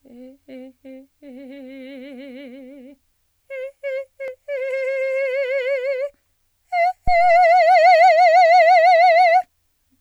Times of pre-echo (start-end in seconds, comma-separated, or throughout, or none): none